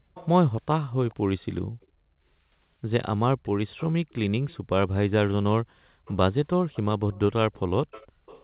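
From 0.00 to 0.14 s the room sound drops away sharply, by about 40 dB, then returns. This is background gated by the echo canceller, which clamped the microphone down while the loudspeaker was playing. The same dip recurs at 1.63–2.07 s, 5.58–6.05 s and 8.08–8.26 s.

Between 0.14 and 1.87 s, a faint copy of the speech trails the original by about 0.43 s, roughly 20 dB quieter. It returns at 3.44–4.57 s and from 6.05 s to the end, about 25 dB down. This echo leak is likely a loudspeaker-side echo canceller failing to remove all of its microphone pickup and sending the remainder back.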